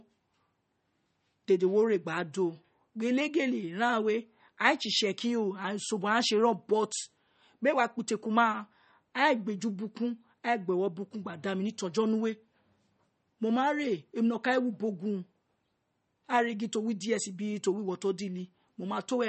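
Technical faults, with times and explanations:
Throughout, MP3 compression: speech has a swirly, watery quality with nothing above 8.4 kHz, likely from a low bitrate around 32 kbps starving the encoder.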